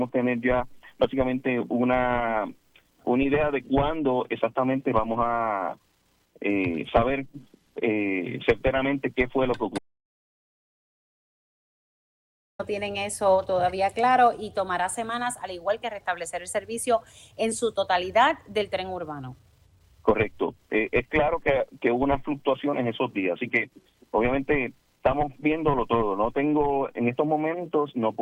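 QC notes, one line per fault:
9.78–12.59 s, audio dropout to silence: the sound cuts off mid-flow for 2.81 s, likely from a lost input, leaving a flat, silent waveform and a blank spectrogram with no room tone.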